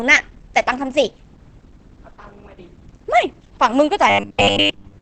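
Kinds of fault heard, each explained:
Opus compression: The speech sounds muffled and hoarse throughout, with plainly audible codec damage and nothing above about 9 kHz, which fits a low bitrate near 16 kbps in the speech mode, likely Opus. A spectrogram shows a flat ceiling at that frequency.
Robotic sound from repeated short buffers: From 4.10 s to the end at 5.01 s, the speech becomes a rigid 100 Hz metallic buzz, likely from a 10 ms chunk replayed over most of the span. The waveform shows identical repeating cycles, and the spectrogram shows evenly spaced harmonic lines.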